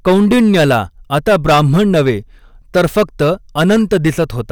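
Hard clipping runs through the whole speech clip. The signal is driven about 10 dB beyond what a stage in the chain can pass, so every peak is sliced flat, and roughly one sample in fourteen was cut off at that stage's limit. The flattened tops add a harsh, buzzing fuzz to each loud syllable. On a waveform the peaks show as squared plateaus cut off at one fixed level, and a spectrogram shows bright harmonic smear reaching high into the spectrum on those peaks.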